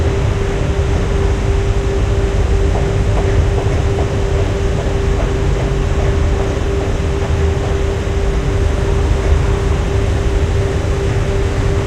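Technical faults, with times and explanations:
No technical faults are present: the signal stays continuous with no interruptions or timing problems anywhere in the clip.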